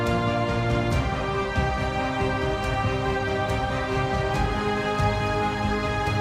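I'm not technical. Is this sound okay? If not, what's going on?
Yes, no faults to report.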